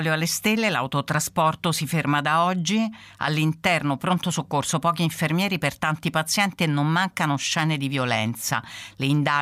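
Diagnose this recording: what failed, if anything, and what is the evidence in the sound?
Nothing in the capture, conversion, processing or playback chain shows a failure, and there is no audible evidence of a fault anywhere in the recording.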